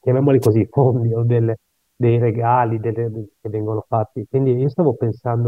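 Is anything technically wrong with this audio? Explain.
Yes. From 0.42 to 0.47 s there is a wireless microphone noise hit: a 50 ms swish of static. The FM radio link briefly faded as reflected signals cancelled, so receiver noise rose for that instant.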